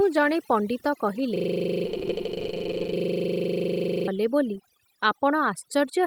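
From start to finish, overdone noise removal has pushed frequency bands near the noise floor down or off, taking quiet speech detail with them. Gaps fall to near silence with twinkling specks. A spectrogram shows a blank background dotted with isolated bright flecks.

At 1.36 s a system hang loop sets in and lasts until 4.08 s. One 40 ms piece of audio repeats exactly, producing a steady buzz at 25 Hz. The waveform shows an identical short block tiled end to end, and the spectrogram shows evenly spaced vertical stripes.

Within that stretch, just after "ଜଣେ ପଣ୍ଡିତ", a call bitrate drop runs from 1.87 to 3.01 s, bottoming out for about 1.08 s. The sound turns rough and muffled as coding coarsens and high frequencies vanish, which fits a fall from roughly 32 to 9 kbps. The spectrogram's upper region goes dark.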